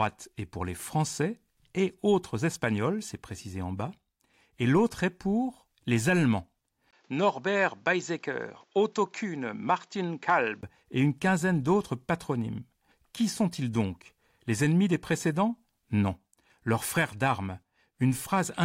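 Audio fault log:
6.91–10.63 s: likely input switched to a poorer device. After a 20 ms gap, the speech loses everything above 7.6 kHz and turns duller over a new noise floor roughly 40 dB down, with little level change, starting just before "et une quinzaine d'autres".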